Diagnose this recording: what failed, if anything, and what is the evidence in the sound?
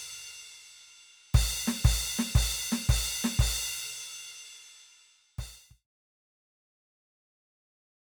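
Nothing in this music recording points to a failure at any stage, and the only level change is a deliberate, smooth fade-out that begins at about 4.5 s and reaches silence at 5.87 s with no click or hard edge.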